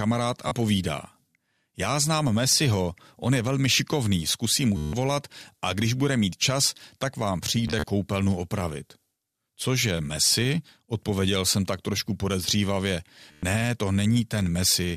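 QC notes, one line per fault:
0.49–0.51 s: Bluetooth stutter. Packets arrive late, so the receiver replays its last buffer. About 27 ms repeats as a short buzz.
4.77–4.93 s: Bluetooth stutter, after "velmi šikovný zkusím mu". About 160 ms is lost. The repeats form a machine-gun rattle.
7.68–7.86 s: Bluetooth stutter, after "mít čas tak vám". Gaps totalling about 93 ms are scattered over 187 ms. The longest run is 40 ms.
13.32–13.43 s: Bluetooth stutter, after "jsem tak trošku podezřívavě". About 107 ms repeats. The speech then resumes further ahead.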